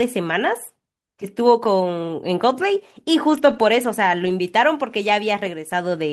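Speech, with two short stretches where the sound turns rougher and noisier without ever dropping out: from 3.29 to 3.63 s, and again from 4.25 to 4.31 s. Both are lost packets rebuilt from error correction. Each following packet carried a low-bitrate copy of the missing audio, and the decoder played that copy. The first stretch sounds like roughly 180 ms of rebuilt frames, the second like about 40 ms.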